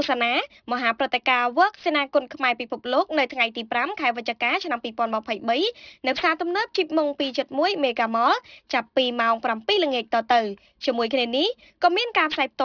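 Aliasing runs throughout: the upper range sounds gritty and metallic because content above 5.5 kHz folded back as false tones, pointing to an unfiltered drop from 44.1 kHz to 11 kHz. At about 20 dB down, mirrored partials crowd the 5.5 kHz edge on a spectrogram.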